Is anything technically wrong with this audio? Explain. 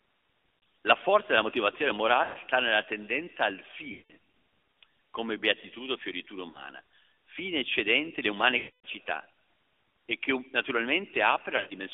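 Yes. The speech is narrow, boxy and buzzy throughout. It has no low end below roughly 300 Hz and nothing above about 3.6 kHz, and the codec roughness is plainly audible. This is the AMR narrowband mobile codec. It rebuilds each 20 ms frame from a vocal-tract model driven by a few pulses, and the texture fits its 10.2 kbps mode. The coarse excitation produces a synthetic, buzzy edge.

Lost AMR speech frames appear as six brief disturbances: at 0.63 s, 2.24–2.53 s, 3.92–4.14 s, 6.50–6.62 s, 8.58–8.86 s and 11.56–11.74 s. In the longer runs, the sound smears and warbles, then sags toward silence before recovering rough and weak. The worst gap is about 260 ms at 8.58 s. At 0.63 s and 11.56 s the losses are scattered in runs of up to 40 ms, which gives stuttering dips rather than one dropout. Corrupted frames made the decoder repeat its last pitch and filter settings with falling gain.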